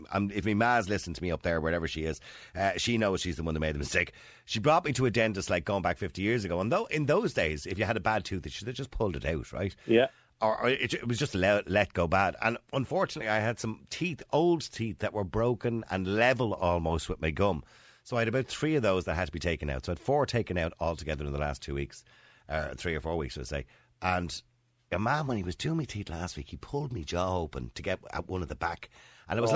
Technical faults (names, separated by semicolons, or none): none